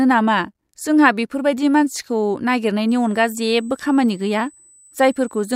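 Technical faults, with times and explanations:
2.89 to 5.55 s, USB whine: a fixed-pitch whine at 8 kHz, strongest at its 16 kHz harmonic, starts and runs to the end, roughly 25 dB under the speech. The bus's 125-microsecond microframe current pulses leak into the audio through power or ground.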